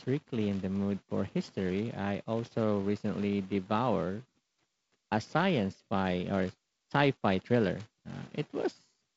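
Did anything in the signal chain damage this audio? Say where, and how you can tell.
No, nothing in the chain damaged this speech; it's simply carried over G.722 wideband telephone coding, which is why it stops around 7.7 kHz and has a faint, light grain from the codec.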